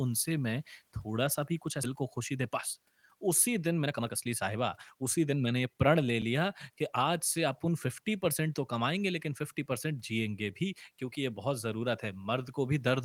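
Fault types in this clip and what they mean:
skip ahead: about a second of speech vanishes at 1.83 s and playback jumps straight on with no fill, unlike a dropout's audible hole.
jitter buffer speed-up: from 2.01 to 5.88 s speech runs about 11% fast at unchanged pitch as roughly half a second is trimmed, unlike a resampling speed change.
block of digital silence: at 6.22 s a 7.31 ms stretch drops to silence, heard as a tick rather than a lost passage.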